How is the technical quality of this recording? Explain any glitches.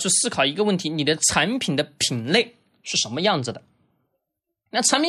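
Nothing technical gets in the way here; the speech comes across without any glitches to point out.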